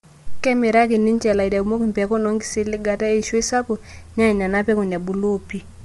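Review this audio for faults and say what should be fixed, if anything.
Low-delay AAC compression affects the whole speech clip. The voice sounds rough and grainy, with noise between the harmonics and nothing above 11.6 kHz. A spectrogram shows smeared harmonic lines and a hard ceiling at 11.6 kHz. The likely cause is AAC-ELD, whose short frames resolve pitch poorly at a bitrate that fits around 32 kbps. Sending at a higher bitrate, or using a longer-frame codec where low delay isn't needed, would prevent it.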